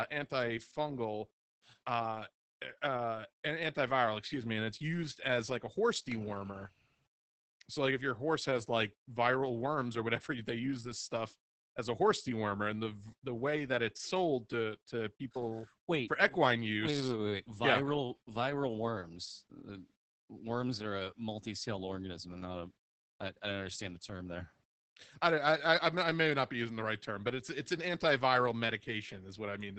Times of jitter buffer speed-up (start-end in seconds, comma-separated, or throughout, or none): none